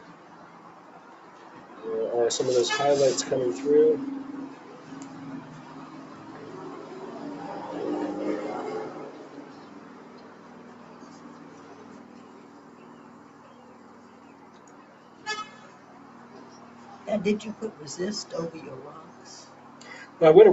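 From start to finish, a noise suppressor built for speech is working on sound it was not designed for. It treats steady tones, ambience and reverb as noise and pulls them down. Sharp onsets mostly pass, but held sounds and decaying tails sink, by around 10 dB at a time. The level keeps swinging as a result. The sound pumps, flutters or thins out. The call microphone path also limits the audio to nothing above 8 kHz.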